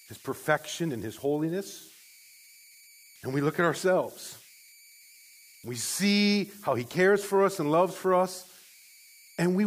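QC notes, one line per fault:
Throughout: converter idle tones. A whistle sits near 2 kHz in the pauses of the speech, and a grainy hiss lies under the quieter syllables, about 28 dB below the signal. With no dither, the delta-sigma converter settles into repeating bit patterns whenever its input is small. Those patterns produce tones whose pitch follows the input's offset.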